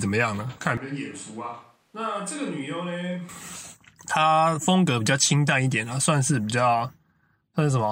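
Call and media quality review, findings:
Speech turns roomy and hollow, bass thinned, level about 10 dB lower, from 0.77 s to 3.29 s. Room noise rises to roughly 35 dB below speech. Probable component: capture path, likely a switch to a distant microphone after the close mic dropped. Hard cuts in and out, with tone, level and noise changing together, separate it from added reverb or an EQ change.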